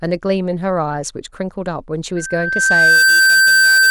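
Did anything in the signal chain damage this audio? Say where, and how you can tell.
Yes. At the playback stage, a microphone is hearing its own loudspeaker, and the loop gain passes unity at 1.6 kHz. From 2.16 s to 3.90 s this loudspeaker feedback squeal swells over about a second into a steady tone roughly 10 dB above the speech.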